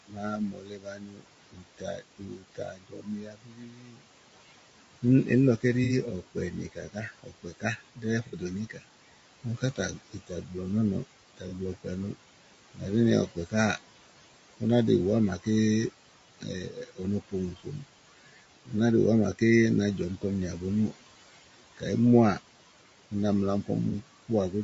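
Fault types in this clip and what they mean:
noise suppressor artifacts: A processor pulls down bands it judges to be steady noise, frame by frame. Here the room noise, about 16 dB below the speech, is cut by about 17 dB. The residue sinks between phrases and rises under the voice.
low-delay AAC compression: The voice sounds rough and grainy, with noise between harmonics and a thin, synthetic top end. This plainly audible damage likely comes from AAC-ELD, the short-frame call codec, at a rate which fits about 32 kbps.
speech cut by the noise suppressor: The suppressor mistakes parts of the voice for noise and turns them down. From 0.08 to 13.53 s, about five seconds in all sound swallowed, dropping up to about 19 dB. Briefer cuts follow, from 14.6 to 15.47 s and from 16.39 to 24.53 s.
AAC frame loss with concealment: Lost frames are patched from the last good spectrum, leaving a short smeared, phasey blur. 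Gaps of 60 ms fall at 5.84 and 8.27 s. Gaps of 30 ms fall at 11.48 and 23.90 s.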